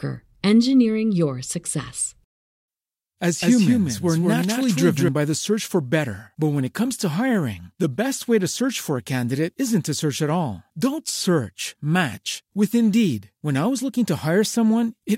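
From 3.42 to 5.08 s the speech carries a doubled audio track. A second copy trails by roughly a fifth of a second, somewhat quieter. It is dry and full-band, with no room decay. It switches on and off abruptly. A slower second capture path is the likely cause.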